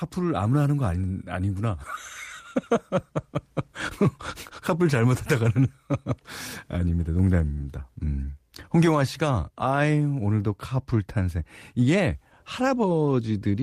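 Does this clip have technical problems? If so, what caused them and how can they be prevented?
No, this clip has no technical problems, so there is nothing to trace to a cause or to prevent.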